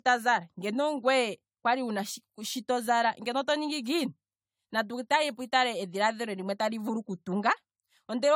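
Throughout, the speech has likely been re-encoded with AAC-LC around seven times, each pass requantising on a shifted frame grid. This generation loss piles up noise and spectral holes. Attacks smear, the sound turns swirly and hollow, and nothing remains above 18.6 kHz, which fits a 96 kbit/s setting.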